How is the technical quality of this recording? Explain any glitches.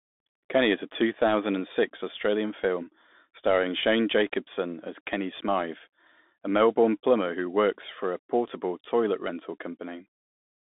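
The quality is poor: the speech has passed through a Bluetooth CVSD headset codec for the whole clip. The codec encodes one up-or-down bit per sample, consistent with a 64 kbps link, so plainly audible grainy hiss and scratchy sibilants sit within a narrow 200 Hz to 3.6 kHz band. A spectrogram shows a hard ceiling with nothing above 3.8 kHz; the waveform carries a fizzy noise floor.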